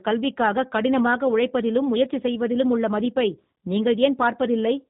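Throughout, the speech carries plainly audible G.729 codec damage. The speech is rebuilt from a vocal tract filter, pitch predictor and sparse pulses, which fits an 8 kbit/s G.729A stream. Unlike simple band-limiting, it adds a rough, synthetic grain on top of the cut above 3.8 kHz.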